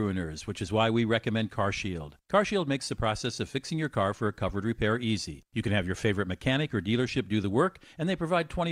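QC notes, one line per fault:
No technical faults can be heard anywhere in the speech recording, and its signal remains steady and intact throughout.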